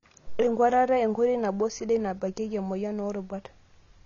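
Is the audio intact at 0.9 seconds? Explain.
No. Likely AAC compression runs throughout, including 0.9 s. Coarse quantisation leaves the speech dull and smeared, and a spectrogram shows a flat ceiling at 7.2 kHz.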